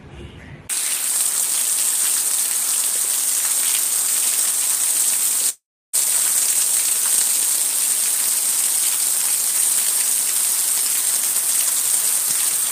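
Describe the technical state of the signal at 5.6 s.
At 5.6 s the signal sits inside a long network dropout running from 5.49 to 5.95 s. The preceding sound smears into a fading buzz, then about 0.31 s of silence follows, likely because packets never arrived and concealment gave out. A spectrogram shows decaying smeared bands, then an empty gap; the waveform flattens.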